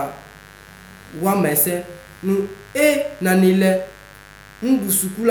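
A mains buzz on 50 Hz runs under the speech from start to finish, roughly 25 dB down: switching spikes from poor shielding or a rectifier give a harsh, rasping hum.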